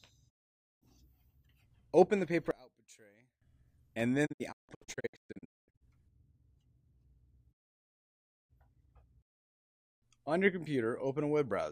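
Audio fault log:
0.28–0.84 s, 4.25–5.83 s and 7.52–8.52 s: digital broadcast dropout. The signal fades to silence in about 20 ms each time and comes back later. The first gap is roughly half a second. The second is about a second of lost audio in several short holes over 1.5 s, the longest 0.22 s. The third is a solid second.
2.51–3.42 s: one channel inverted. The sound drops by about 25 dB, with little left of its centre. That's most likely one stereo channel flipped in polarity, so the shared content cancels when the channels are summed to mono.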